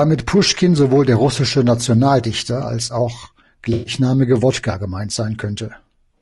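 Throughout the clip the speech sounds rough and grainy, with a hiss filling the gaps between the pitch harmonics and a thin, somewhat synthetic top band. This is likely low-delay AAC compression of the AAC-ELD kind used for video calls. Its very short frames cannot separate the harmonics of the voice cleanly, and at a rate around 32 kbps there are too few bits left to code the spectrum faithfully. The result is plainly audible damage.

From 3.73 to 3.93 s the sound turns into a smeared, noisy, phasey patch before normal decoding resumes. This is AAC frame loss with concealment. A run of frames went missing, about 120 ms of coded audio, which fits roughly six frames. The decoder covered the hole by reusing the last good spectrum with altered phase and estimated energy. That produces the blurred texture in place of real detail.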